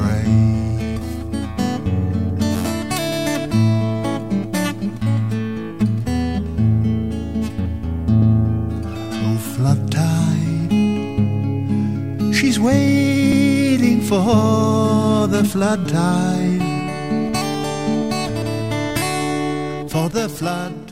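A stutter at 3.12 s, 8.22 s and 13.32 s comes from overlapping chunks: each 5 s block begins 100 ms before the previous one ended, so that slice plays twice. The regular 5.1 s spacing and repeated material, not silence, separate it from dropouts.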